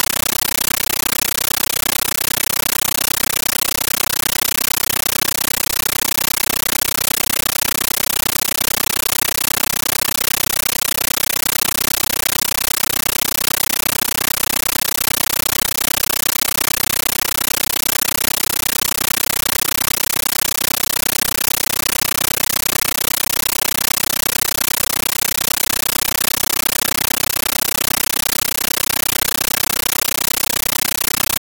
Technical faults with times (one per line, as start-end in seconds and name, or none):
0.00-31.40 compressed stream played as audio